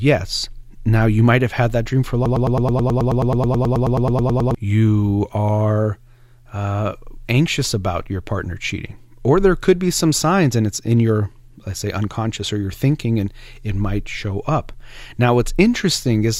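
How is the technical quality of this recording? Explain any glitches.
There's one real glitch, a broken-record loop from 2.26 to 4.55 s, right after "had that dream for". A tiny 0.11 s fragment repeats back to back 21 times, a stuttering buzz, likely from a stalled player or stream resending its last chunk. Speech resumes at "you are uh anxious", with the audio in between lost.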